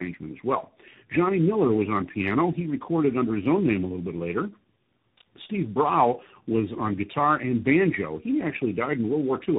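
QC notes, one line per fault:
Throughout: tandem speech coding. The speech passed through three speech codecs in a row, G.729A, AMR-NB and finally CVSD, with G.711 links in between. Each one re-encoded the previous one's damage, so the voice sounds rough, muffled and warbly. On a spectrogram nothing appears above 3.8 kHz, and the harmonics look smeared.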